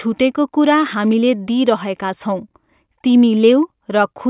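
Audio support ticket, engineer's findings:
No technical faults found in the speech signal; no dropouts, clipping, glitches or timing errors were heard.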